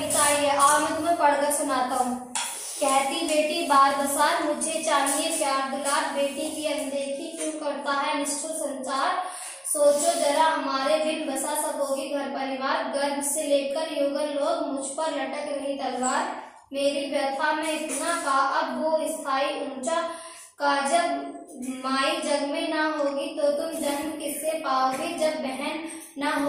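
At 23.52 s the audio switches abruptly, with no gap, to a coarser rendering that lasts to the end of the clip: an adaptive stream at a lower bitrate. The connection evidently slowed, so the player moved to a cheaper encoding. The sound of it fits Opus stepping down from about 64 to 32 kbit/s. Codec artefacts become more noticeable. On a spectrogram, the change shows from that instant, while the waveform continues unbroken.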